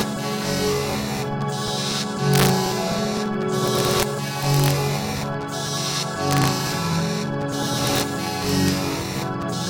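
Integer overflow appears six times: 2.34 to 2.49 s, 3.68 to 4.03 s, 4.43 to 4.71 s, 6.31 to 6.48 s, 7.87 to 8.01 s, and 8.49 to 8.68 s. The level passed the largest integer value by about 1 to 2 dB. The peaks were not limited. They wrapped to the opposite sign and jumped across the full range. Each overload is heard as cracks on the peaks of the sound, sharper than clipping.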